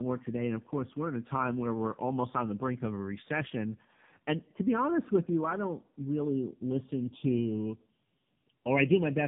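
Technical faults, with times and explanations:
throughout, tandem speech coding: the speech sounds rough, muffled and warbly, with a grainy, smeared edge and nothing above 3.7 kHz. The roughness points to low-rate AMR-NB coding applied twice, with a plain telephone-band link between the two. The second coder had to model audio already stripped and distorted by the first, so their errors stack and the result is worse than either pass would leave alone.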